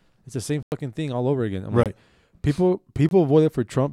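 At 0.63 s the speech drops to a block of digital silence for about 93 ms, ending at 0.72 s. Two shorter blocks of 23 ms follow, at 1.83 s and 3.09 s. The lengths fit whole 4096- and 1024-sample buffers. Each cut is abrupt, with no fade.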